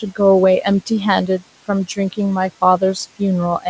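A short speech clip with noise suppressor artifacts throughout. The suppressor pulls the room noise down by about 15 dB between phrases and lets it back up under the voice. The background pumps with the speech as a result. The room noise sits about 19 dB below the speech, so the suppressor is working on a modest floor. Nothing is heard above 8 kHz, which fits a wideband call codec such as G.722. There is also speech cut by the noise suppressor in two places. The first is at the very start, from 0.00 to 0.19 s. The second runs from 1.87 to 2.19 s. In each, about a tenth of a second of speech is turned down with the background. The drop reaches about 9 dB at the start and about 13 dB in the later spot. Soft sounds there come out faint and swallowed, because the suppressor mistook low-level speech for noise.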